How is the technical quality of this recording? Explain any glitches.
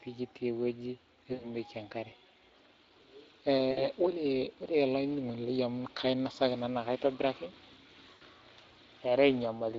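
The whole clip runs through the Speex codec at a bitrate that points to roughly 20 kbps, and the damage is plainly audible. Its CELP coding has too few bits for the excitation here, so the speech comes out hoarse and grainy, with a noisy edge.

There are three dropouts from VoIP packet loss, concealed by the speech codec, at 1.33–1.48 s, 3.71–3.87 s and 8.13–8.24 s. Each sounds like 60–80 ms of lost audio. The decoder keeps repeating its last pitch and filter and lowers the gain as it goes, so the voice smears into a buzzy tone or a coloured noise that fades, and stays weak briefly after the gap.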